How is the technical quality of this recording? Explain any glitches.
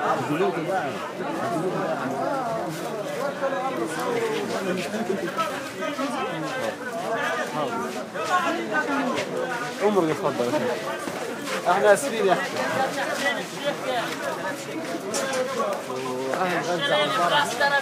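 The recording of everyday sounds has no technical glitches to report. Nothing in the audio points to a fault in how it was captured or handled.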